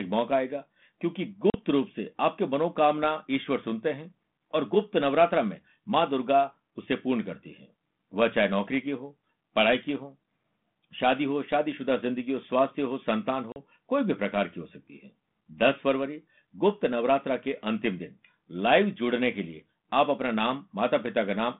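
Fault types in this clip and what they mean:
Packet loss on an ADPCM call: twice, at 1.50 s and 13.52 s, about 40 ms of the G.726 audio, roughly two packets, drops out and is replaced by silence. On a waveform each appears as a flat gap with hard edges; on a spectrogram, a clean vertical blank across the whole 150 Hz to 3.6 kHz band. The decoder's adaptive predictor and step size fall out of step with the sender's, so speech resuming after each gap is briefly distorted until it settles.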